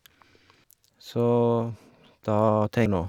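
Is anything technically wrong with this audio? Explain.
Yes. The speech has damaged data in a compressed stream, heard as two brief glitches at 0.64 s and 2.86 s. At each point the decoder met corrupted bytes, misread the frame and had to resynchronise on the next valid header, so a short chirp or squawk cuts across the speech. On a spectrogram each shows as a thin vertical smear of broadband energy. In the waveform there is an abrupt, out-of-place burst or discontinuity.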